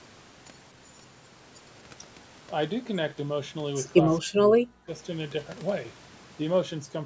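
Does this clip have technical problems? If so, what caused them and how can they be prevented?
Yes. From 4.04 to 4.89 s the speech is suppressed in double talk, most likely because the echo canceller could not tell the near talker apart from the loudspeaker echo while both sides spoke, so it attenuated everything it heard. The speech is turned down across about 0.7 s of that span, sinking by roughly 40 dB at its deepest. Using a headset, or an echo canceller with better double-talk detection, would prevent this.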